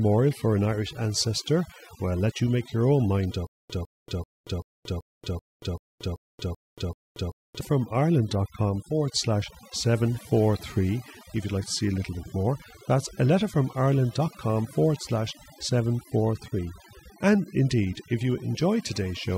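Across the whole speech clip, a noise reduction stage set far too aggressively shows as overdone noise removal. It switches off any frequency band that resembles its noise estimate, so the background drops and breaks up into twinkling specks while softer parts of the voice vanish.

From 3.47 s to 7.61 s, just after "make your own mind", the playback stream has likely stalled and kept retrying, creating a stutter with silent gaps. A 154 ms fragment repeats ten times, each followed by about 231 ms of digital silence, giving a steady 385 ms cycle. The speech that belonged in that span is lost.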